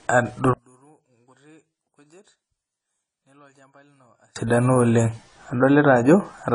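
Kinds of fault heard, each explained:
AAC compression: Low-bitrate AAC-LC coding, likely around 24 kbps, removed all content above 10 kHz and leaves plainly audible codec damage throughout the speech.
One channel inverted: One stereo channel likely had reversed polarity, so summing to mono cancelled the shared sound, dropping it about 38 dB from 0.53 to 4.36 s.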